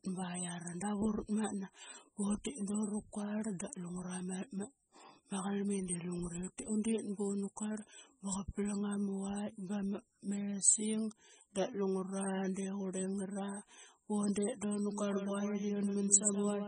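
All the way through, the speech has that watery, swirly quality of heavy MP3 compression. Nothing comes through above 9.3 kHz, and the smeared attacks and flickering detail point to a likely very low bitrate, something like 16 kbps, starving the encoder.

Right after "bundet da una", at 14.91 s, a doubled audio track kicks in abruptly and runs to the end. A full-band copy trails around 150 ms behind at roughly 5 dB down, with no room colour, likely a second capture path mixed back in.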